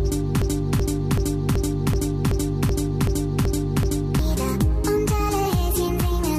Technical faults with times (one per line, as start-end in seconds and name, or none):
0.42-4.19 broken-record loop
5.45 compressed frames skipped